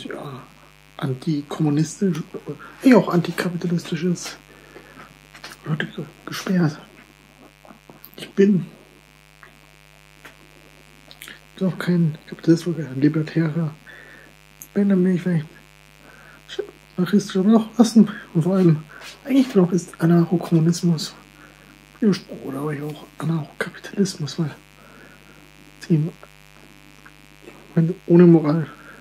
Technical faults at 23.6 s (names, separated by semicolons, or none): mains buzz